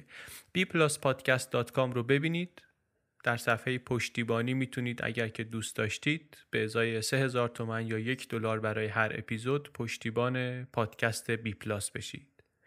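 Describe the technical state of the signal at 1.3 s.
At 1.3 s the speech signal is intact, with no dropout, distortion, glitch or other audible fault at that point.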